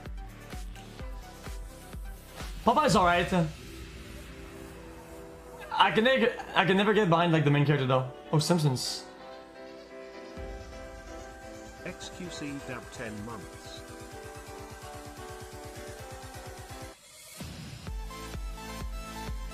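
No technical faults are audible.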